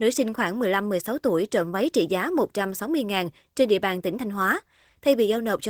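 No technical faults are audible anywhere in this speech recording.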